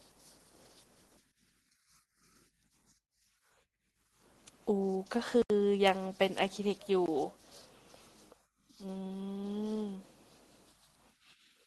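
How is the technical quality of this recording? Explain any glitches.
The recording has two dropouts in speech that has come through an Opus call path, with the top end rolled off around 12 kHz, which points to a low call bitrate. Both glitches are blocks of digital silence: at 5.42 to 5.50 s an 80 ms gap, and at 7.06 s a 20 ms one. Samples were zeroed, likely because the output buffer went unfilled in time. The sound cuts out and back abruptly, so each sounds like a brief hole.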